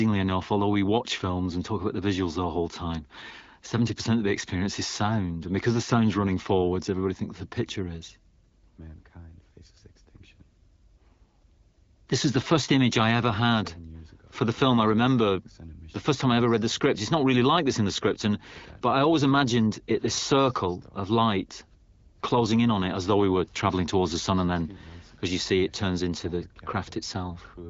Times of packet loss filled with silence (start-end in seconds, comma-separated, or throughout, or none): none